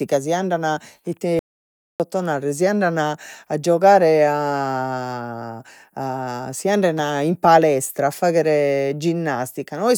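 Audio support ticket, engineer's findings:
Input likely lost (link or device disconnect), writer kept recording silence: audio dropout to silence 1.39–2.00 s, 0.61 s gap, speech cut mid-flow, no room tone.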